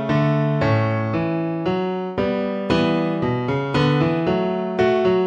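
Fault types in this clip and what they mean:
Nothing here stands out as a technical fault; I can't hear anything that has gone wrong with the audio.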